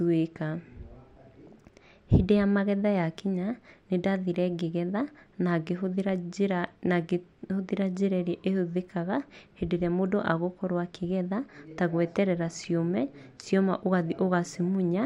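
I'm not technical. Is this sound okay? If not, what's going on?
Yes, nothing in this recording sounds wrong.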